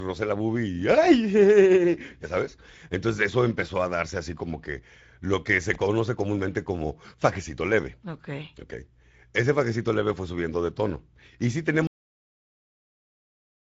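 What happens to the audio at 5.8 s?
A loose connector crackle runs from 5.74 to 5.80 s, between "que lo que se" and "comúnmente como fajecito leve". A worn contact rapidly makes and breaks, chopping the signal into an irregular scratchy burst. The waveform shows jagged dropouts and spikes, and the spectrogram shows a brief broadband smear of vertical streaks.

Under it, the Speex codec damage continues. The speech sounds hoarse and noisy, which fits a mid-rate setting around 16.8 kbps. On a spectrogram, the energy stops at 7.7 kHz, and the upper band looks like diffuse noise rather than clear harmonics.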